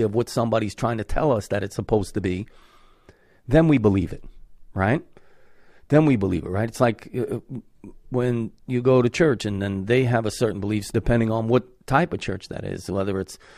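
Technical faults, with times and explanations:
9.40 s, overlap between stream segments: a tiny skip in the speech between "when you go to" and "and then they have". The timestamps of two adjoining segments overlapped, and the player trimmed the overlap from audio that was not actually duplicated. About 6 ms of real signal is discarded, so the waveform jumps discontinuously at the splice, giving a brief, slightly clipped transition. The stream uses 6.0 s segments.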